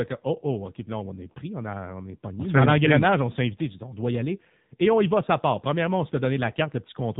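AMR narrowband mobile codec damage runs through the whole speech clip: nothing above about 3.8 kHz survives, and the vocal-tract model leaves a buzzy, synthetic voice fitting a low 7.4 kbps mode.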